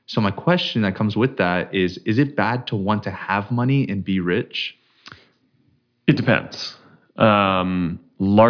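No technical faults occur anywhere in the speech, so there is nothing to describe in time order.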